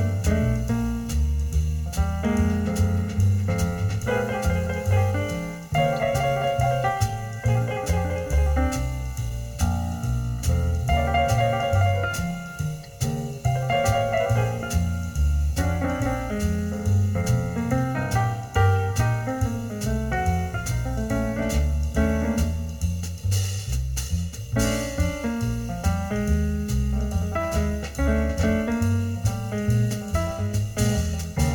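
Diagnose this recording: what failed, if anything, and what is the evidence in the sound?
Channel delay (comb filtering) throughout: one channel lags around 1.5 ms before the mono sum, probably at the driver stage, cutting notches from roughly 300 Hz upward, hence the hollow sound.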